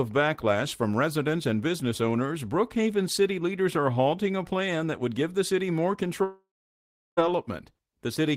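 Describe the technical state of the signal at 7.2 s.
At 7.2 s the speech is just resuming after a gap that began at 6.23 s and ran to 7.19 s. The last sound before it smears into a fading buzz, then roughly three quarters of a second of near-silence follows, and the audio returns without the missing stretch. This points to a long network dropout as the likely cause: nearly a second of packets never arrived, and the receiver concealed the hole before giving up to silence.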